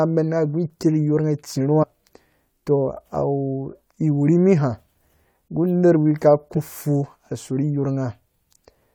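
At 1.82 to 1.84 s and again at 6.56 s, compressed frames are skipped. About four frames, roughly a tenth of a second of speech, never play, and the sound jumps ahead. The spectrogram shows an abrupt discontinuity, and the waveform shows no gap.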